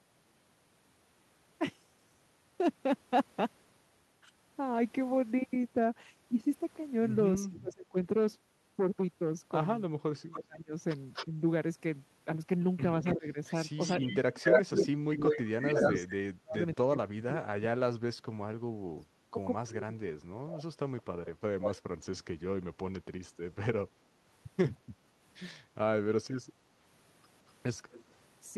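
At 7.37 s a faint delayed copy of the speech appears, an echo leak about 315 ms behind. A loudspeaker echo likely slipped past the far side's canceller. It returns at 10.34 s and 13.04 to 16.05 s, about 270 ms late, the last louder than the talker. It comes back at 20.5 s and 27.92 s, about 170 ms late. It sounds like a ghost of the voice.

From 7.57 s the talker's own speech dips sharply. This is speech suppressed in double talk. The canceller likely turned both voices down while echo overlapped them. It repeats at 10.06 to 11.4 s and from 13.14 to 20.02 s. Drops reach about 30 to 35 dB.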